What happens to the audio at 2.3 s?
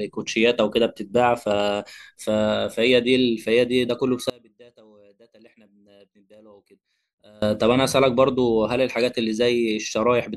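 Nothing goes wrong at 2.3 s; the speech carries on intact through that moment with no dropout, click or distortion.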